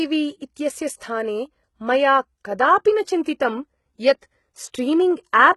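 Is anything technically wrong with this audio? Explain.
Yes, there are two problems.

Throughout the clip, the speech bears the marks of heavy low-bitrate compression, likely HE-AAC. The damage fits a bitrate around 16 kbps. The codec would code only the lower spectrum and synthesise the treble by copying lower bands upward under a coarse envelope. Because that upper region is rebuilt rather than preserved, its harmonics don't align with those below. The sibilants sound gritty and metallic, and nothing is present above about 11.8 kHz.

From 3.23 to 3.26 s there is pre-echo. A sharp attack arrived late in a transform block, and the quantisation noise sized for that loud moment was spread across the whole block, including the quiet stretch just before it. That leaves a short hiss of about 26 ms ahead of the onset, and the attack itself sounds softened and smeared rather than crisp.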